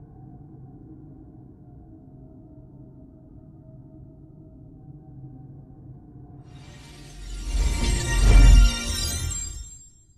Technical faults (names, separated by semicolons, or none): none